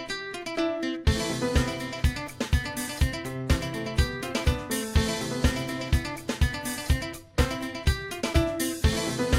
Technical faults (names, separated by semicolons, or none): none